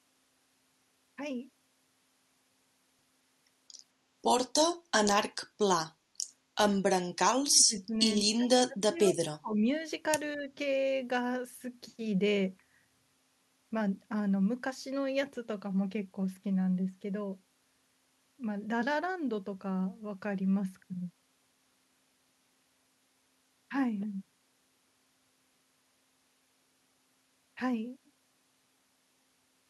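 Speech, with the talker pushed down three times: 7.31 to 7.95 s, 8.35 to 9.64 s, and 10.36 to 10.49 s. The dips reach about 20, 30 and 5 dB. This is speech suppressed in double talk. An echo canceller likely mistook the talker for echo while both sides overlapped.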